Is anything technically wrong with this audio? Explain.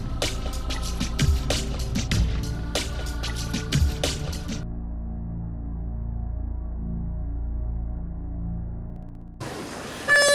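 Yes. Periodic USB or driver dropouts run from 8.9 to 10.29 s: something stalls the audio path every 63 ms, and each time around a millisecond of audio is skipped outright. The result is a steady ticking, roughly twenty clicks, heard only while sound is present.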